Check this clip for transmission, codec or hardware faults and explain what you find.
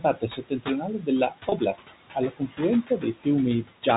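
Three kinds of fault are present: noise suppressor artifacts throughout, repeated speech cuts by the same suppressor, and one short packet loss bridged with pitch repetition.

Noise suppressor artifacts run through the whole clip. The suppressor pulls the room noise down by about 16 dB. It works frame by frame on each frequency band it judges to be steady noise. So the background dips in the gaps and swells back under the speech. That room noise sits about 11 dB below the speech, which is close.

Speech cut by the noise suppressor happens five times: 0.00 to 1.08 s, 1.30 to 1.91 s, 2.14 to 2.60 s, 2.84 to 3.26 s and 3.63 to 3.87 s. The deepest drops are about 18, 15, 18, 16 and 17 dB. The suppressor mistakes soft parts of the speech for noise and turns them down. The first stretch loses about half a second in total. The later ones lose between a tenth and a fifth of a second each. The speech turned down there sounds swallowed or faint.

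Packet loss with pitch repetition occurs at 1.49 to 1.52 s, inside the second cut. About 30 ms of audio is missing, which fits three lost 10 ms packets. The receiver fills the hole by repeating the last pitch period. Because the gap is short, it never fades to silence. It sounds like a brief held, buzzy tone before the speech resumes. The G.711 telephone band, which stops at 4 kHz, frames everything.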